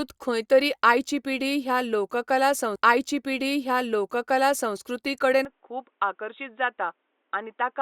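From 2.75 to 4.75 s, a stream segment repeated: the player queued the same stretch twice, so two seconds of speech play again after a small blip at the jump back. Unlike a buffer stutter, which repeats a few milliseconds, this replays a whole chunk of the programme.

At 5.45 s, with no gap, the sound turns dull and boxy through to the end. Nothing above 3.8 kHz remains, the level drops by about 5 dB, and a new noise floor sits roughly 45 dB down. This is likely an input switched to a poorer device. A simple low-pass filter would cut the top end without changing the level or bringing in new background noise.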